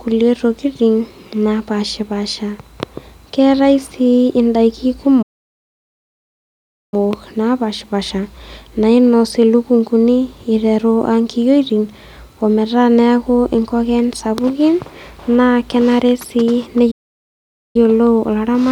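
Playback stalls at 5.22 s (1.7 s) and 16.91 s (0.84 s, after "naa kenare sii") cut the speech to silence mid-flow, likely from the player running out of data, before it resumes.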